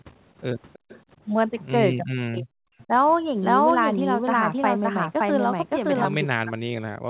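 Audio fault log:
0.73–1.0 s and 2.79–2.83 s, echo leak: a faint delayed copy of the speech trails the talker, about 25 dB down at a 324 ms lag in the first stretch and about 30 dB down at 347 ms in the brief second scrap. The likely cause is a far-end loudspeaker whose echo canceller let some pickup through. Unlike a doubled track, the copy is weak, short-lived and its lag drifts slightly.
1.97–2.68 s, 2.84–2.92 s and 6.31–7.1 s, speech suppressed in double talk: the speech level collapses, by roughly 40 dB across about 0.7 s in the first span and to the end of the clip in the last, and by roughly 20 dB over about 70 ms in the short middle dip. This is likely an echo canceller clamping down while both sides talked at once. These are gaps in the main speech, not an added second copy.
3.41–6.05 s, doubled audio track: a second full-band copy of the speech runs about half a second behind, at much the same level as the original, so every syllable sounds twice. 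A second capture path or a misaligned edit is the likely cause. It differs from echo leak in being as loud as the original, fixed in delay and free of room colour, and it starts and stops abruptly.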